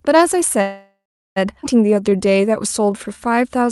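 At 0.61 s the speech stalls and a call audio freeze takes over until 1.38 s. The last sound carries on as a fading buzz for a few hundred milliseconds, then drops to silence for roughly the final 0.37 s before the speech resumes where it left off. The likely cause is packets held up in transit, leaving the jitter buffer empty. On a spectrogram the final harmonic pattern smears into a decaying horizontal band, then a blank gap. The waveform shows a tapering envelope followed by a flat line.

At 1.62 s comes a skip ahead. About half a second of speech is gone, and the two sides are joined with almost no gap. The join is only a few milliseconds long, so the ear hears an abrupt jump rather than a pause. The spectrogram shows formant tracks that change suddenly at a vertical seam, and the waveform shows a discontinuity with no quiet stretch.

From 1.87 s to 3.66 s a jitter buffer slow-down stretches the speech to about 90% speed, adding 189 ms. 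Single pitch periods and pause fragments are repeated to rebuild the reserve, so the sounds are drawn out at unchanged pitch. On a spectrogram, harmonics stay at the same height while syllables widen. The waveform shows near-identical periods repeated in runs. Throughout, the energy stops near 12 kHz, which fits a call codec such as Opus running at a super-wideband setting.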